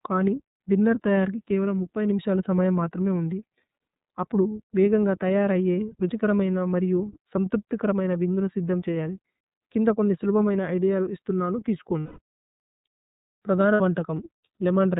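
Speech coded through the iLBC codec throughout, band-limited to narrowband so a spectrogram shows nothing above 4 kHz, with the slightly rough, synthetic texture that fits its 30 ms, 13.33 kbps mode. There are lost iLBC frames at 12.00–12.19 s (180 ms) and 13.74–13.81 s (60 ms). In each gap the decoder repeats the last pitch cycle mixed with noise, giving a held, buzzy vowel. On the spectrogram this appears as flat, unchanging harmonic bands, and the waveform shows near-identical repeated periods, with normal speech returning immediately afterward.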